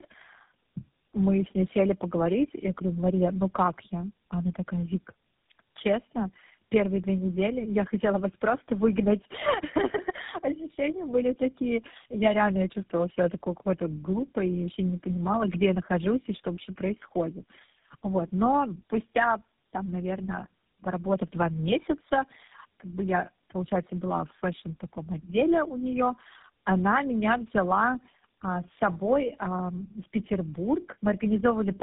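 From start to finish the speech carries tandem speech coding. The sound points to three low-rate speech codecs in a row, likely a G.729A leg, an AMR-NB leg and a final GSM full-rate leg joined through ordinary telephone links. Each coder re-encodes the previous one's damage, so the errors stack up: the voice comes out rough and warbly, with a smeared, muffled quality, and nothing above 3.7 kHz survives.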